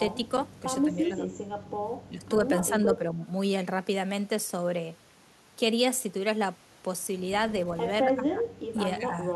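The speech ducks at 0.84–1.28, 2.85–3.21, 8.03–8.43 and 9.0–9.15 s, dipping about 10, 5, 15 and 5 dB. That's speech suppressed in double talk, likely an echo canceller clamping down when both ends talked at once.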